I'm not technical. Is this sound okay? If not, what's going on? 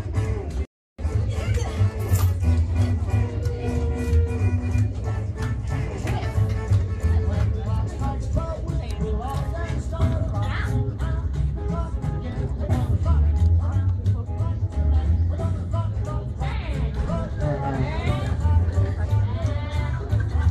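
No. A rebuffering stall at 0.65 to 0.99 s: the player ran out of downloaded audio, went silent for about a third of a second, then resumed exactly where it stopped.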